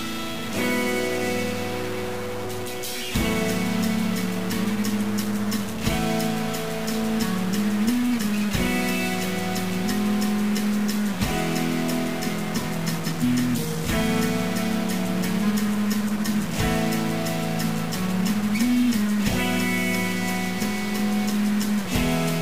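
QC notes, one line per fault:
throughout, stuck bit: a converter bit is likely stuck, shifting half the samples by a step of about -30 dBFS, causing harsh, buzzy distortion.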